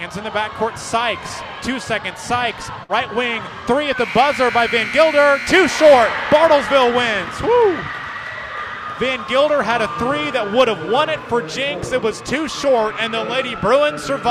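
At 2.83 s the sound smears into a brief held, fading tail, then jumps ahead at 2.92 s: a burst of packet loss, concealed for about 55 ms, with roughly 60 ms dropped.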